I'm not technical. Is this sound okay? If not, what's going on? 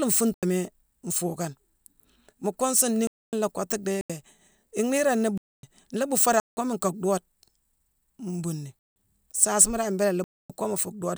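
No. The speech drops out seven times, at 0.34, 3.07, 4.01, 5.38, 6.40, 8.79 and 10.24 seconds. Each is a block of digital silence lasting about a tenth to a quarter of a second. The sound cuts off abruptly, leaving a brief hole, probably because the playback program didn't deliver audio in time.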